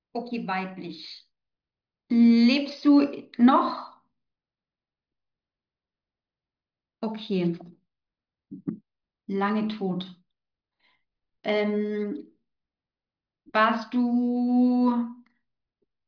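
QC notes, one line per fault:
No faults found on this speech clip; nothing to log.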